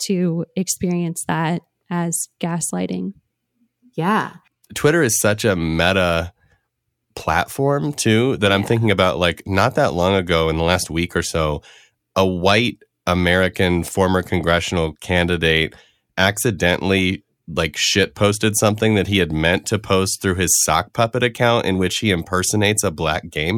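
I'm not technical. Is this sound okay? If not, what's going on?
Yes, it's fine: I don't hear anything wrong with this recording at any point.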